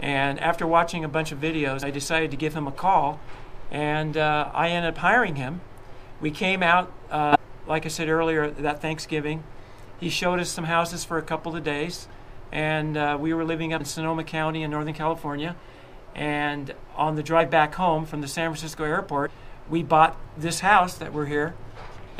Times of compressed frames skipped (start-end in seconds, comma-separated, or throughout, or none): 1.81, 7.32-7.36, 12.10-12.16, 13.79-13.82, 19.25-19.29